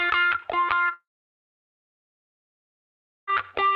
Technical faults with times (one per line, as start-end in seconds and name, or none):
0.93-3.29 long network dropout